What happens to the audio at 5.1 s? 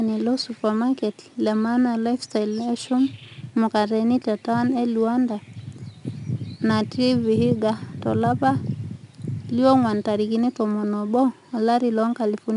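At 5.1 s the speech carries a gritty hiss that rises and falls with its loudness, with roughness on sharp onsets and nothing above about 10.7 kHz. This is 4-bit ADPCM compression, present across the whole clip rather than just at that moment. Each sample is coded as a coarse 4-bit step from a prediction, so loud passages bring louder error noise, and the step size lags behind fast attacks. The dull top end and the data rate fit a sample rate near 22 kHz.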